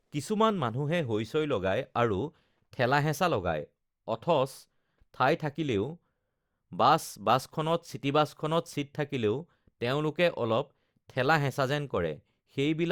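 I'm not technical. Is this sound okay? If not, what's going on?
Yes, nothing wrong can be heard in this recording.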